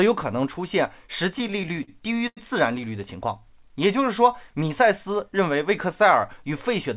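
From 1.34 to 2.39 s there are repeated stalls (stutter). Packets arrived late, so the jitter buffer kept emptying. Sound was stretched to fill gaps up to 89 ms, making the speech drag and judder.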